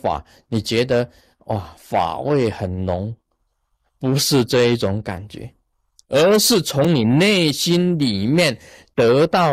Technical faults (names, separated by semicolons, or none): block of digital silence